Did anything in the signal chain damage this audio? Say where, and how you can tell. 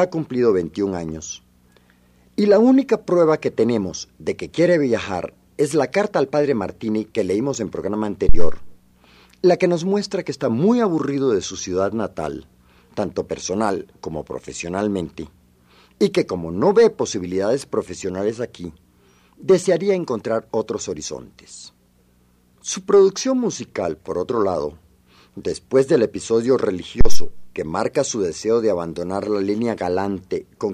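Yes. In the analogue input, a phantom power thump at 8.29 s and 27.01 s: a supply step through coupling capacitors, a waveform swing to about −1 dBFS decaying over 70–78 ms, and a low-frequency smear on the spectrogram.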